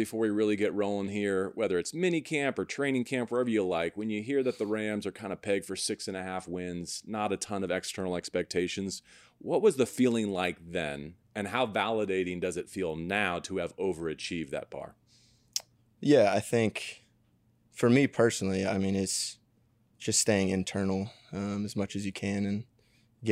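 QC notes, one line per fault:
Nothing to flag on this speech recording; it all sounds fine from the first moment to the last.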